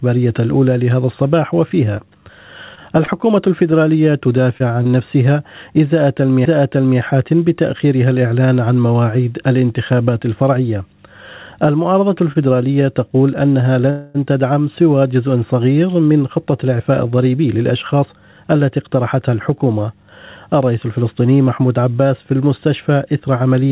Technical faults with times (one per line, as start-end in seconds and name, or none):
1.97-4.94 scattered short gaps
12.32-12.37 short stall from a late packet
13.90-14.27 call audio freeze
15.95-18.24 jitter buffer speed-up